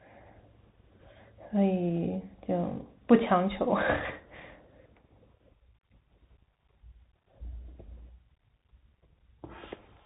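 Throughout the speech, the Bluetooth CVSD headset codec is plainly audible. Nothing passes above 3.8 kHz, and a granular hiss sits underneath. Its one-bit up/down coder, which fits a 64 kbps link, cannot adapt its step fast enough, so sibilants turn scratchy and loud high sounds distort.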